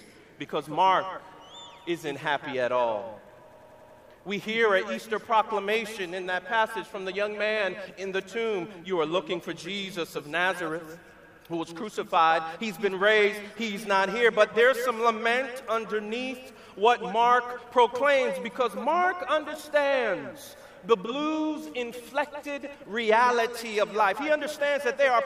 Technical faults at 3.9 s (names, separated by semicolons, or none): system hang loop